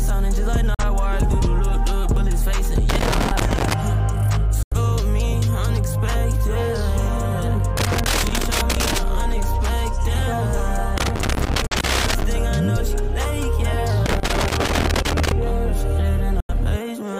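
At 0.74 s a digital broadcast dropout hits. The receiver loses good frames and mutes with a 3 ms fade, leaving a silent hole of about 43 ms, which fits one lost frame. The waveform shows a flat gap with clean edges, and the spectrogram shows a blank vertical stripe.

From 2.89 to 3.73 s comes loose connector crackle. A poor contact keeps making and breaking, chopping the signal. It sounds like irregular scratching. The waveform shows ragged spikes and breaks, and the spectrogram shows scattered broadband vertical streaks.

At 4.63 s a longer dropout mutes about 85 ms, consistent with two lost frames.

Crackle returns from 7.77 to 8.98 s and again from 10.98 to 12.24 s. A single-frame dropout of about 43 ms falls inside that second burst, at 11.67 s.

Crackle runs again from 14.06 to 15.32 s. A final two-frame dropout of about 85 ms comes at 16.40 s.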